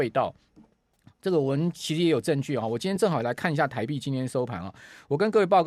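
A brief smeared, noisy blip at 0.94 s and again at 2.96 s is AAC frame loss with concealment. The decoder patched gaps of 20 ms and 10 ms by reusing the last good spectrum, which fits the short frames of likely low-delay AAC.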